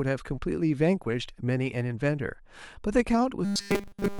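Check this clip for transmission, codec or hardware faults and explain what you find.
One fault, near the end. From 3.45 s to 4.19 s the speech becomes a rigid, metallic 200 Hz buzz that only roughly follows the words: robotic sound from repeated short buffers, likely caused by audio arriving too seldom, so a 5 ms buffer loops continuously throughout.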